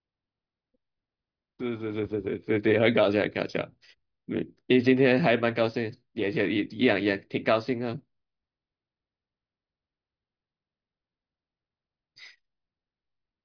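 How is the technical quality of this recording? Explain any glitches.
No technical glitches can be heard in this recording.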